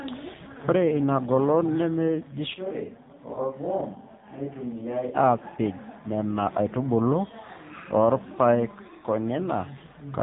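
Across the whole recording the speech sounds boxed-in and buzzy, with nothing above 4 kHz and a synthetic edge on every voiced stretch. That is the AMR narrowband mobile codec at 7.4 kbps, rebuilding the voice from a compact vocal-tract model and sparse pulses, and the damage is plainly audible.

From 3.34 to 3.38 s there is a brief dip or warble. This comes from lost AMR speech frames. About 20 ms of data went missing, which points to a single lost frame, and the decoder bridged the gap by repeating the previous pitch and tract settings at reduced gain.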